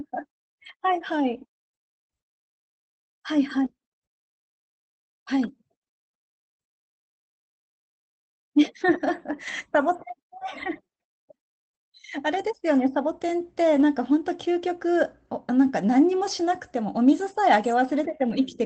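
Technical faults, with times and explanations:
5.39–5.49 s, 9.47–9.49 s, 13.75–13.81 s: lost packet rebuilt from error correction. No gaps, but each 60, 20 and 40 ms patch sounds briefly rougher and noisier. The next packet carried a low-bitrate copy of each lost one, and the Opus decoder played that copy in place of the missing audio.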